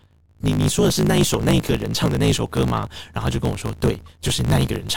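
A speech clip with a block size mismatch (truncated) throughout. One stage writes longer blocks than the next reads, so each block's tail is dropped. That leaves a steady buzz at 54.4 Hz. The speech runs 1.16 times fast at near-normal pitch, which fits 1024-sample written blocks. A corrupt frame was decoded at 1.34 s, and a short run of a few corrupt frames at 2.77 to 2.85 s. Damaged frame data sends energy to wrong frequencies, heard as brief chirps or bursts.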